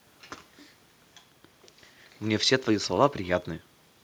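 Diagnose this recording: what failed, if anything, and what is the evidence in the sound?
Nothing in this speech recording points to a failure at any stage of the chain, so there's no fault to trace.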